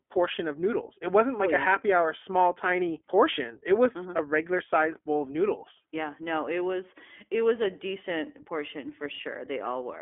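Throughout, the speech has passed through the iLBC codec, which codes each 20 ms frame on its own. The plainly audible roughness fits its 15.2 kbps mode. Nothing passes above 3.6 kHz, leaving a thin 250 Hz to 3.4 kHz telephone band with a synthetic edge.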